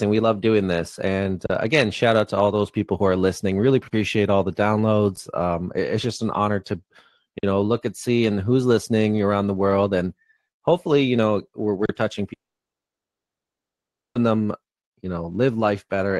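Underruns with held sample occur at 1.46, 3.88, 7.39 and 11.86 s. The output briefly stops, the level freezes flat, and playback resumes softly where it stopped. Each gap lasts 35 to 46 ms. The longer two fit a 2048-sample buffer.

After "touching", at 12.33 s, a long network dropout is the likely cause of a fading buzz that turns to silence. About 1.8 s is lost. The sound returns at 14.17 s with "them you know".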